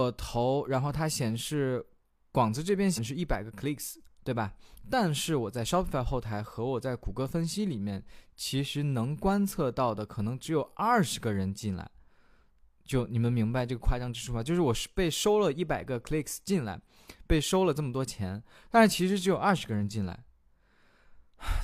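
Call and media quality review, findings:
Brief glitch at 2.93–2.99 s, speech jumps ahead. Compressed frames skipped: decoder dropped missing or rejected frames, likely two frames of about 46 ms each, so roughly a tenth of a second lost.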